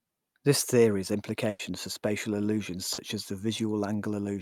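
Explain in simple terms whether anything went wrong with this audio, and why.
Yes, two things went wrong, both from parts of the call not arriving in time.

At 1.49 to 1.61 s, between "theory has" and "for spatial illusions", there is a burst of packet loss. About 100 ms of audio never arrived, so the receiver kept stretching out the last sound it had and faded it down, which gives a brief held buzz or hiss. When the real audio comes back, that tenth of a second of speech is simply gone.

At 2.93 to 2.99 s, between "for spatial illusions" and "as the", there is a short concealed packet loss. Only about 40 ms was missing. The receiver patched the hole by continuing the previous sound and then blending back into the real speech, so you hear a quick smear or wobble rather than a clear gap.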